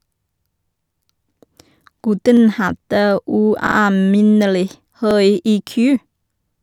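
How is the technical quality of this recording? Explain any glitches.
The speech has three brief stutters from a repeated buffer at 2.37–2.42 s, 3.67–3.76 s (replayed twice) and 5.11–5.16 s. Late data made the device replay its last 46 ms block, which fits a 2048-sample buffer. Each repeat is heard as a hard-joined repeated fragment, with essentially no audio lost.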